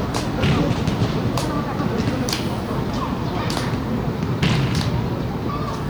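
A brief glitchy blip cuts through the sound at 2.26 s and again at 5.48 s. Both are damaged data in a compressed stream: corrupted bytes made the decoder misread those frames and lose sync until it found the next valid frame header.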